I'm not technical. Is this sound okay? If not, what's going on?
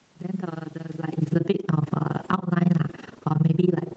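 No, there are a couple of real problems here.

The big one runs the whole way through: an overlap-add ripple. The sound was chopped into overlapping slices and stitched back together, but the overlaps don't add up evenly, so the level dips and rises with every slice, roughly twenty times a second. It's a deep dip, which gives everything a fast, rough flutter, almost like a rough tremolo sitting on top of the speech.

Then there's the automatic gain falling, three separate times: from 1.21 to 1.58 s, from 2.1 to 2.51 s, and from 3.11 to 3.63 s. Each time, the automatic volume control decided the input was too loud or too noisy and eased its gain down, so the speech and the background sink together over those stretches. It's a noticeable drop each time, not just a subtle dip.

Working against that is automatic gain rising, from 1.49 s right through to the end. Here the same control decided things were too quiet and kept slowly turning the gain back up, so voice and background swell together. 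Because it overlaps with those three drops, the level keeps see-sawing, pulled down and then crept back up, instead of settling at a steady volume.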